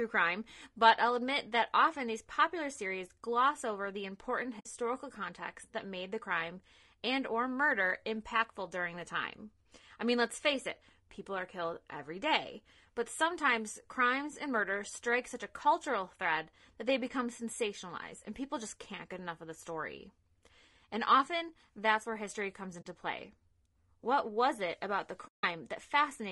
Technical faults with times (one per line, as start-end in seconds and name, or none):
0.00-26.31 low-delay AAC compression
4.59-4.67 AAC frame loss with muting
22.81-22.86 AAC frame loss with muting
25.28-25.44 AAC frame loss with muting